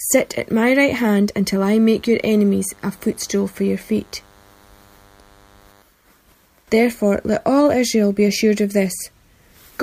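From 1.92 to 5.82 s, a DECT cordless phone buzz appears. Radio bursts every 10 ms get rectified, giving a thin 100 Hz buzz, faint beneath the sound.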